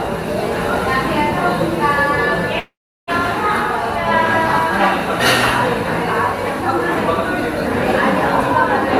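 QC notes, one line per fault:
2.59–3.10 s, long network dropout: the sound decays into a buzz or hiss, then about 360 ms of silence, likely lost packets; the waveform shows a fading tail, then a flat gap.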